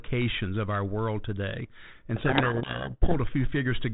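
From 2.16 s to 3.20 s there is a codec payload misread. The speech is buried in harsh, rasping distortion. The G.726 code words arrive in a different bit order than the decoder expects. It rebuilds the wrong differences from its prediction. The 32 kbit/s telephone-band sound, with its light coding damage, returns at 3.20 s.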